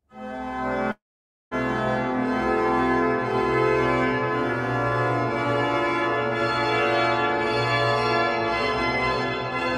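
The audio breaks off at 0.91 s and resumes at 1.54 s, the signature of a long network dropout, which is the likely cause. At the break, the receiver stretches the last sound into a short fading buzz, then holds roughly half a second of silence. When the audio returns at 1.54 s it simply continues from later on: about 0.6 s of material never arrived and is absent, with no catch-up or overlap.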